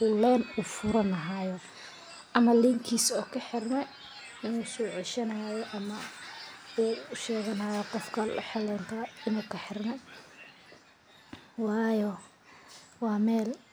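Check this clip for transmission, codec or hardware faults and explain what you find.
Nothing here points to a transmission, codec or hardware problem; the speech comes through with no faults to report.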